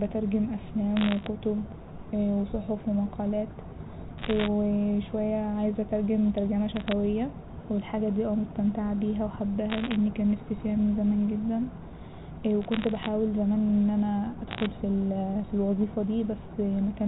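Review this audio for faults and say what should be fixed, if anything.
Bit errors on a digital phone line cause bursts of sharp ticks and crackle at 0.97–1.26 s, 4.18–4.47 s, 6.76–6.92 s, 9.70–9.96 s, 12.62–13.08 s and 14.51–14.66 s, densest near 4.2 s. Each flipped bit corrupts one sample, so the speech around the ticks stays continuous, unlike packet loss, which leaves gaps. Fix the faulty line or add error detection and concealment.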